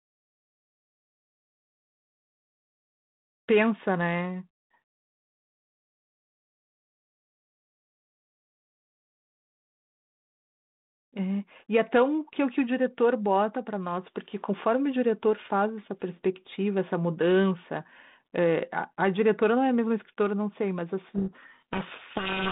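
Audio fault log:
21.08–22.52 s, codec payload misread: the receiving end starts unpacking the G.726 code words with their bits in the wrong order, so each 4-bit difference value it decodes no longer matches what was sent, and the adaptive predictor is pushed off course sample after sample. The speech is buried under harsh, grinding distortion from 21.08 s to the end of the clip. Before that, the 32 kbit/s telephone-band path carries the speech with only light coding roughness.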